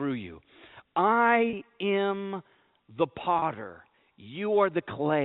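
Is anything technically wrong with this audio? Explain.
Yes. There is packet loss with pitch repetition at 1.50 s, just before "am the", and at 3.39 s, just after "am the". Each gap lasts about 30 ms, consistent with a single lost packet. The receiver bridges it by repeating the last pitch period, which sounds like a brief, slightly held buzz.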